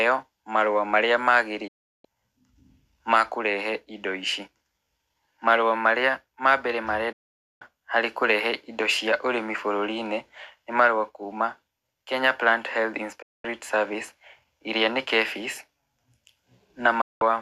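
The speech snaps to silence after "marũa marĩa" at 1.67 s for 0.36 s, after "marua marĩa ma mbere" at 7.12 s for 0.48 s (returning on "harĩ kũrehe indo cia"), at 13.22 s for 0.22 s, and at 17.01 s for 0.19 s, each with an 8 ms fade. This is a digital broadcast dropout: the receiver lost good frames, muted, and the programme sent during each gap is gone.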